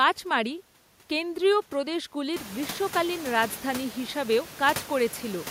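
No technical faults occur in this speech; the room's own background noise rises by about 18 dB at around two and a half seconds, but that belongs to the recording itself.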